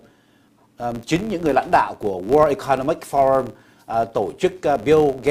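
Right from the start and running the whole way through, there's a filter restarted on every block. The filter is dropping its memory at each block boundary and starting again from silence, so every block opens with a little transient. Those land about 93.8 times a second, which fits a 512-sample buffer, and together they make a steady tick-buzz that gets louder and quieter along with the sound itself.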